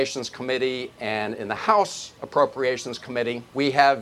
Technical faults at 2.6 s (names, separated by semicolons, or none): none